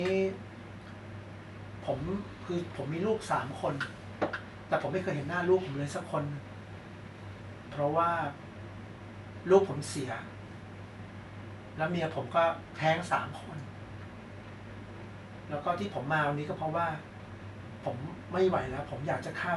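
No technical faults can be heard in the speech; the only background is the room's own noise, sitting about 55 dB below the speech.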